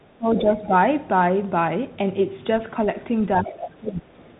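Bluetooth CVSD headset codec, throughout: the speech is squeezed through a one-bit-per-sample adaptive-step coder, so nothing above 3.8 kHz survives, s sounds turn scratchy and a granular hiss sits underneath. That character fits a 64 kbps headset link.

Speech suppressed in double talk, 0.0 to 0.49 s: the voice drops by roughly 30 dB for about half a second, most likely an echo canceller muting both voices while confused by overlapping talk.

Other side's voice leaking through, 3.24 to 3.52 s: a second voice sits around 15 dB under the speech, likely loudspeaker echo the canceller failed to remove.

Speech suppressed in double talk again, 3.44 to 4.11 s: overlapping that leak, the talker dips by about 15 dB for roughly 0.7 s, likely the same canceller turning down both sides.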